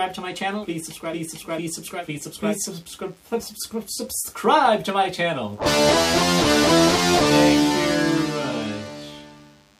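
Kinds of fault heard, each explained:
DECT cordless phone buzz: runs through the whole clip as a thin, steady buzz sitting about 40 dB below the main sound. A nearby DECT handset or base station sends a brief radio burst every 10 ms, and some stage of the audio circuitry rectifies that energy, turning the bursts into a 100 Hz pulse train. Because each burst is short and sharp-edged, the buzz carries a dense stack of harmonics above 100 Hz, giving it that raspy edge.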